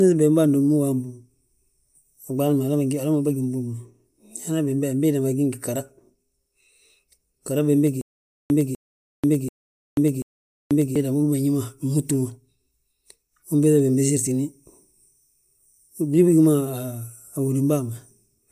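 A stutter with silent gaps runs from 8.01 to 10.96 s in the speech. The same 0.25 s burst plays four times, each followed by about 0.49 s of dead digital silence, so it returns on a steady 0.74 s cycle. The likely cause is a stalled player or stream that replayed its last buffered fragment on each retry and then ran dry. The speech that should have filled those three seconds is lost.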